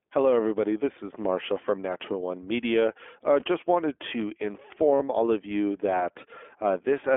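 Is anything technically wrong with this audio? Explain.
Yes. The speech runs through the iLBC codec the whole way, and it drops packets twice. iLBC is a narrowband VoIP codec that codes each 20 ms frame of excitation independently at 15.2 kbps. The audio sits inside a telephone band of roughly 300 Hz to 3.4 kHz, and the coding damage is plainly audible as a rough, slightly synthetic edge. On a spectrogram everything above 3.4 kHz is empty, and the lowest band under 300 Hz is thin.

The lost iLBC frames come at 3.40 to 3.44 s, just before "wanted to", and at 4.97 to 5.01 s, just before "all of you". The first loss is about 20 ms and the second about 40 ms. Each time the decoder fills the hole by repeating the last pitch cycle blended with noise, so there is a brief held, buzzy vowel. Because the frames stand alone, the voice recovers almost immediately afterwards. On a spectrogram each gap shows flat, repeated harmonics with a noisy haze in place of normal movement. 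The waveform shows a short run of near-identical cycles.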